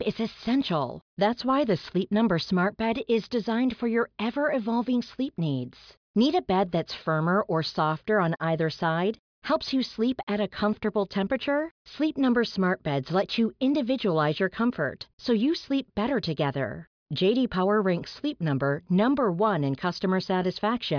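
No technical faults can be heard at any point in the speech.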